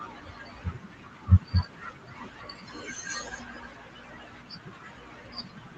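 From the start to 3.07 s, and again from 3.23 s to the end, the noise suppressor cuts the speech, pulling it down by about 12 dB and then about 13 dB for nearly the whole clip. Room noise sits about 25 dB below the speech, and the suppressor mistakes soft consonants and word tails for background. Unlike a packet-loss dropout, there are no clicks, hard gaps or robotic fill, only a swallowed, fading quality.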